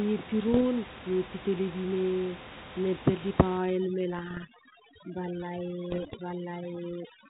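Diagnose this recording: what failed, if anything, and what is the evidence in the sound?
Bit errors on the ADPCM link, a transmission-stage fault: pops and rough bursts with brief level jumps at 0.53–0.63 s, just before "miempi telebi", then at 4.19–4.47 s and 5.90–6.16 s. Each flipped bit corrupts the decoder's adaptive step size and predictor, so the damage rings on briefly.

Overdone noise removal in call processing, from 3.58 s to the end: the room noise, about 13 dB below the speech earlier, drops and breaks up into twinkling specks. Bands near the noise estimate are cut hard, taking quiet speech detail too.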